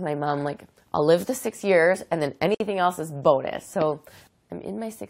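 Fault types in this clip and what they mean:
Gap at a join of encoded pieces: at 2.55 s the continuous sound drops out in a gap of about 57 ms, with smeared edges, then resumes exactly where it stopped. Separately encoded pieces were joined without trimming, leaving each encoder's start delay and final-frame padding.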